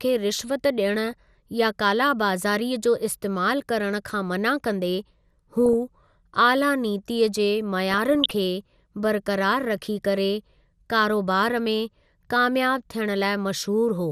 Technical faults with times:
0.00-14.11 MP2 compression
1.05-1.13 DAB burbling
5.66-5.73 DAB burbling
7.89-8.31 DAB burbling

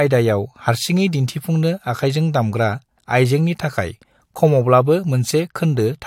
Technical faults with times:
none

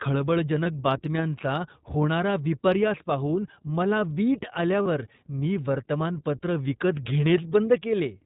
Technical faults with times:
0.00-8.26 iLBC codec
0.64-0.67 lost iLBC frames
4.82-4.88 lost iLBC frames

